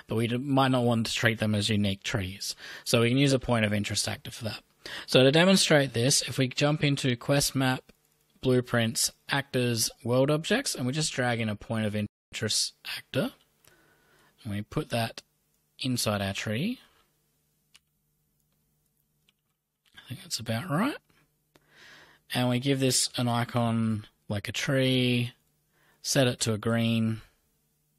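At 12.06 s the audio halts in a rebuffering stall: playback ran through its downloaded data and waited for more, so the sound drops to silence until 12.32 s, adding about 0.26 s, then picks up exactly where it stopped with nothing skipped. On a waveform this is a flat, silent gap with abrupt edges; on a spectrogram, a clean vertical band of empty frequency content across the whole range.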